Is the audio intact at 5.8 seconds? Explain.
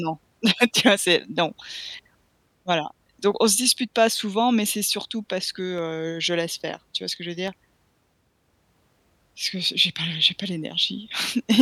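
No. At 5.78 s, between "c'est surtout parce que" and "heu je laisse faire", there is a single sharp click, most likely from dropped samples: a fraction of a millisecond skipped, so the waveform jumps. Unlike a dropout, no sound goes missing or silent.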